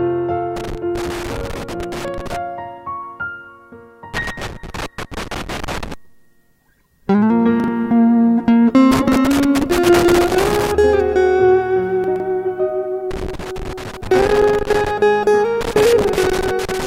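From 0.56 to 2.36 s, and again from 4.14 to 5.94 s, a loose connector crackle breaks up the sound. A worn or dirty contact is making and breaking as it shifts, so the signal is chopped on and off. The result is an irregular scratchy burst lasting about 1.8 s each time.

At 7.60 to 7.68 s the chunks play out of order. A 40 ms block of audio was delivered one chunk late and sits after the block that should follow it. Nothing is dropped, but the brief reshuffle creates three hard joins, heard as a short jumbled stutter.

Crackle returns from 8.91 to 10.71 s. Inside it, at 9.08 to 9.16 s, another 40 ms chunk arrives one position late, adding a garbled blip to the scratching.

At 12.04 to 12.20 s the reordering is larger. A chunk lands three chunks late, so about 160 ms of audio is scrambled, giving a longer jumble.

The connector crackle comes back from 13.11 to 14.91 s, then once more from 15.61 s until the clip ends at about 17 s, with the same rough, intermittent scratching.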